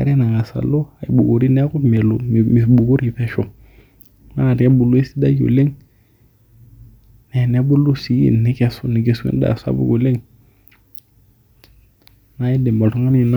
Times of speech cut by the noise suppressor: none

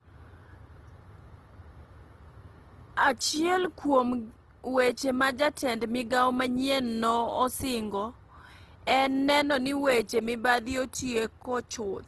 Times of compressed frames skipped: none

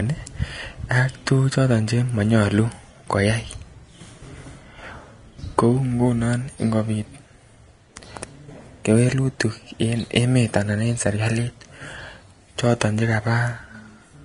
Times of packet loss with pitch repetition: none

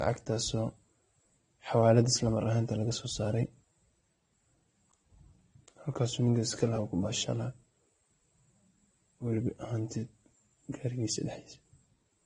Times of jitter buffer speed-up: none

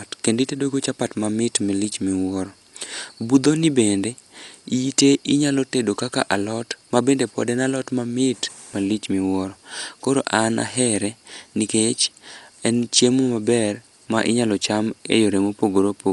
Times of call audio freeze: none

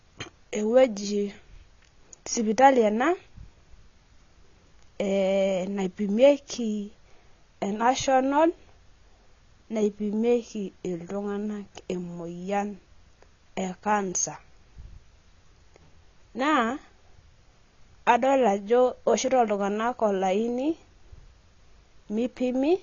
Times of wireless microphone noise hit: none

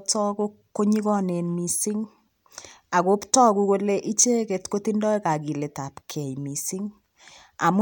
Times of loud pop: none

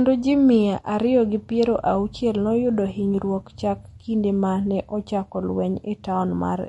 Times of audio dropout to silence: none

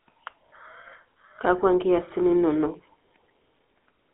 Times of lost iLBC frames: none

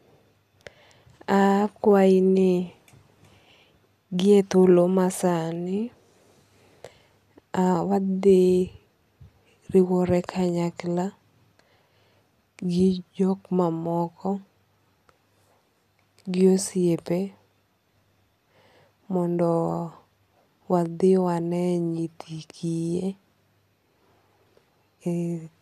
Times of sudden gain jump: none

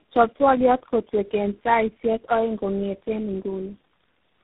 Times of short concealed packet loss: none

